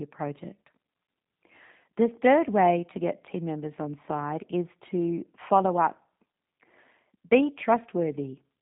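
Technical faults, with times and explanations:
Throughout, G.729 codec. Nothing reaches above 3.8 kHz, so the speech sounds narrow and telephone-like. The roughness is plainly audible. The sound has a slightly buzzy, synthetic edge, which fits G.729A at 8 kbit/s. This codec does not store the waveform. It rebuilds each 10 ms frame from a vocal tract filter, a pitch predictor and a few pulses, so fine detail between those pulses is lost.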